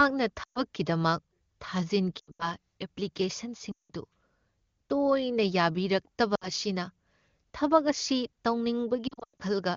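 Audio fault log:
0.43–0.62, 2.19–2.53, 3.72–3.91, 6.35–6.50 and 9.07–9.42 s, lost AMR speech frames: the speech smears, stretches and quickly fades, with broken warbling at 2.19 and 9.07 s, then returns weak and rough. Corrupted frames fail their checksum, so the wideband decoder repeats its last good pitch and vocal tract settings at falling gain.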